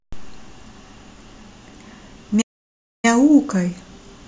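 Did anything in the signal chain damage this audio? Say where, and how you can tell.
Yes, at the playback stage: a playback stall in the speech from 2.41 s to 3.05 s. The sound cuts to silence mid-flow for about 620 ms, then resumes. This likely comes from the player running out of buffered data or its output thread being blocked.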